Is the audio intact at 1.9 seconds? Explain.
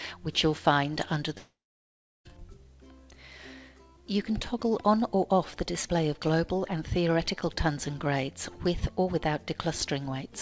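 No. At 1.9 seconds you're right in the middle of a gap from about 1.38 to 2.27 s that sounds like a long network dropout, likely caused by packets not arriving for nearly 0.9 s. The receiver tried to cover it by stretching the last bit of sound into a fading buzz, but that dies out fast, leaving about 0.7 s of silence. That's where 1.9 s lands. When audio resumes it just picks up later, with that stretch gone.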